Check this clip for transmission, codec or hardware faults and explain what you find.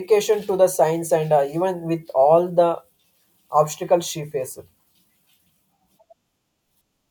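Nothing wrong can be heard anywhere in this speech.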